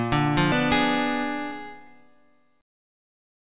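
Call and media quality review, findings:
Skip ahead at 0.52–0.54 s: playback lurches forward with no silence filling the join; roughly 0.4 s of audio never plays. Probable cause is the jitter buffer discarding queued audio on overflow, cutting latency by about the same amount. Waveform shows an abrupt splice, no gap. On the spectrogram there is a hard vertical seam, with nothing above 4 kHz, which fits the narrowband G.711 mu-law call path.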